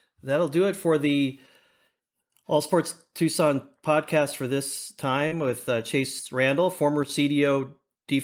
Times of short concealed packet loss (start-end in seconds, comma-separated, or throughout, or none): 5.27-5.33